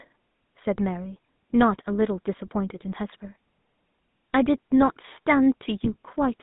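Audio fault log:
Throughout, GSM full-rate codec: speech is confined to about 150 Hz to 3.7 kHz, fitting a 13 kbps pulse-excited coder, with buzzy, gravelly roughness; the spectrogram shows a hard top edge and smeared harmonics.
2.94–2.99 s and 5.84–5.94 s, GSM bit errors: corrupted filter, pitch or gain values cause brief squawks and gargling, visible as short bright smears and level spikes on the waveform.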